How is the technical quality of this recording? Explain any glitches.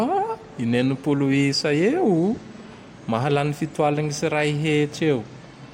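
Nothing here calls for an explanation; I don't hear any glitches anywhere in this speech recording.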